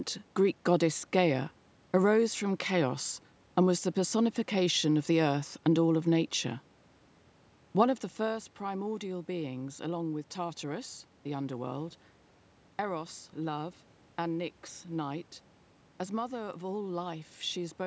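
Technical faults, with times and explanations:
No technical faults; the speech is band-limited to 8 kHz by the call's microphone processing, carries room noise underneath, and shifts in level around 8 s as the talker moves relative to the microphone.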